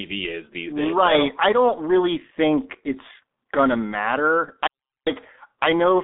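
Throughout, speech passes through the G.723.1 codec at a very low rate, consistent with about 6 kbit/s, cutting everything above 3.8 kHz, so it sounds muffled and hoarse with smeared consonants.

From 4.67 to 5.07 s, an audio dropout to silence occurs, likely from a lost input, leaving about 0.4 s of dead silence with no room tone.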